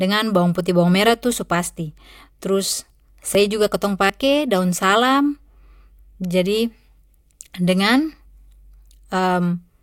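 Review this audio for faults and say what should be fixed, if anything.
Dropped buffer (overrun), likely: the recording software did not read its samples before the hardware overwrote them, so audio was discarded and the two sides spliced together. At 3.35 s and 4.10 s the speech jumps ahead, losing roughly 70 ms and 40 ms without any gap of silence. Prevent it by giving the capture thread higher priority and larger input buffers so reads always keep pace with the hardware.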